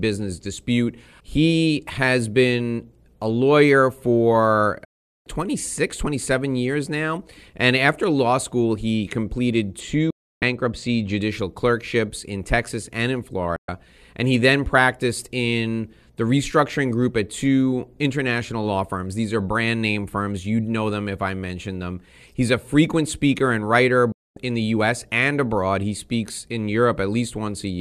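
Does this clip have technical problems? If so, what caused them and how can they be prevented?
Yes. A digital broadcast dropout mutes the speech four times: 4.85 to 5.26 s, 10.10 to 10.42 s, 13.56 to 13.69 s and 24.12 to 24.37 s, lasting roughly 0.41, 0.31, 0.12 and 0.25 s. The receiver stopped getting valid frames and silenced its output until good ones returned. The gap lengths fit whole frames of about 24 ms. Each cut happens within about 3 ms, giving hard, clean silence. Analogue fading would instead bring rising hiss and a gradual loss of signal, and packet-loss concealment would fill the holes with smeared sound rather than nothing. To prevent it, improve reception with a better antenna, position or signal strength so frames arrive intact.

Channel delay (comb filtering) dulls the sound from 9.80 to 11.21 s, overlapping the second dropout. One channel ran a couple of samples late, about 0.05 ms, and summing the two to mono cancelled their shared content around 10 kHz. 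With the first notch that high, the effect is a loss of top-end air rather than the hollow, metallic colour of a longer delay. Unlike a simple low-pass filter, it is a fixed notch, not a steady roll-off. To prevent it, time-align both channels before any mono fold-down.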